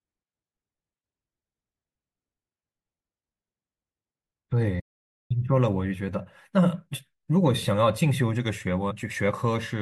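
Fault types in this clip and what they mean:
Playback stall: The speech just stops dead at 4.79 s and the output stays silent for about half a second before picking up again at 5.31 s. The sound simply halts and then carries on. That pattern most likely comes from the player running dry of buffered data or its audio thread getting blocked for a moment, so nothing reached the output until it caught up.
Compressed frames skipped: At 8.90 s the speech jumps forward, with something like 70 ms of audio gone. That size of jump points to a few whole frames of the compressed stream being dropped, either missing from the file or thrown out by the decoder as damaged.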